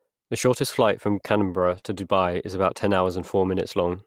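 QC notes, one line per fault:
1.59–1.77 s, lost packet rebuilt from error correction: a rough, noisier stretch of about 100 ms with no gap. The receiver lost that audio and played the low-bitrate backup copies carried in the following packets instead, consistent with five separate 20 ms packets.
1.79–1.84 s, short concealed packet loss: a brief smear or wobble right after the rough patch. About 20 ms arrived too late to decode, so the receiver extended the preceding sound over roughly 24 ms and then blended back into the real signal.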